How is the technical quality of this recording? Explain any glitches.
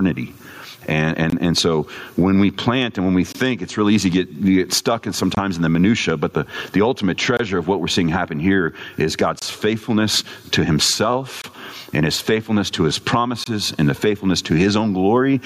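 Technical quality is poor, with two separate problems.

Gain pumping runs through the whole recording. The input gain was most likely set far too high, so a fast limiter or compressor clamps down on every loud syllable and then releases in the pauses, with the level swinging by about 25 dB. The dynamics are flattened, so loud and quiet passages sit at nearly the same level and the speech sounds squashed.

A gap between chunks occurs every 2 seconds, at 1.30, 3.32, 5.35, 7.37, 9.39, 11.42 and 13.44 s, each lasting about 23 ms. The audio was delivered in 2-second blocks, and a short stretch of silence was inserted at each join, as happens with codec padding or a player that starts each block slightly late. Nothing is lost, but the speech is cut by a short hole at a steady rhythm. One comes just before "and so when we", one falls between "seeing happen here is" and "faithfulness to", and one falls between "his faithfulness to his" and "and the faithfulness to".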